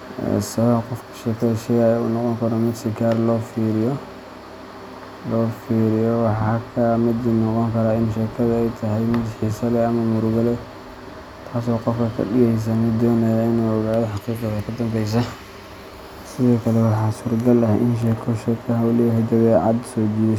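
No technical faults can be heard anywhere in this recording.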